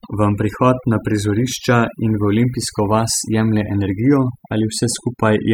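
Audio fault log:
throughout: overdone noise removal. Noise reduction set far too strong has pushed individual frequency bands down whenever they sit near the estimated noise level, taking quiet speech detail with them. Unlike a plain low-pass or gate, the lowered background twinkles with specks.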